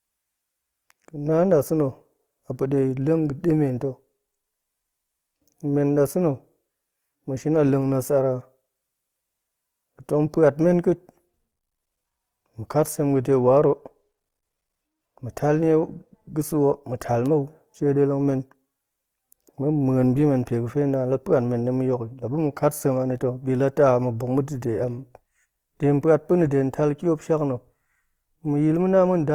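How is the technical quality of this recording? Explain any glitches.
The recording has plainly audible Opus compression running throughout. The damage is constant from start to end. Nothing is left above about 20.4 kHz, so the full bandwidth survives. The texture suffers instead. The speech sounds grainy and rough, with a noisy sheen where tonal detail should be. The likely cause is low-rate Opus encoding in its music mode. When bits run short, it keeps each band's energy but fills the fine detail with noise or folded copies of lower bands. The result fits a rate of around 24 kbps.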